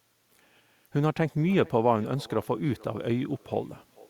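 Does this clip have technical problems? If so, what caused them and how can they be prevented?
Yes. Throughout the speech there is an echo with no canceller: each phrase returns as a faint, thin copy roughly 400 ms later, about 26 dB below the talker. The far end's loudspeaker feeds its microphone and the call path sends it back. Enabling acoustic echo cancellation or using a headset at the far end prevents it.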